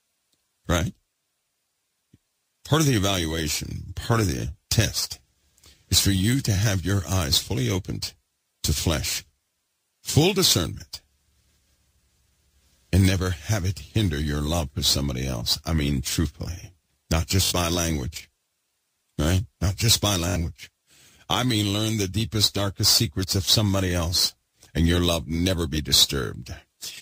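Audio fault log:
17.45 s and 20.29 s, Bluetooth stutter: each time, a short slice repeats for about 80 ms as a rapid buzzing stutter, then the sound resumes roughly 64 ms further on, fitting a few lost packets. Unlike a dropout, the gap is filled with repeated audio rather than silence.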